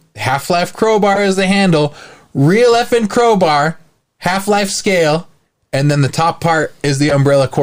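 At 1.13 to 1.19 s and again at 7.09 to 7.13 s the speech is broken by a corrupt frame decoded, each time lasting about 50 ms. Damaged bits in a handful of consecutive compressed frames were played rather than concealed, so misread gains and codes threw energy into the wrong frequencies. Each event is a short, chirp-like burst of noise.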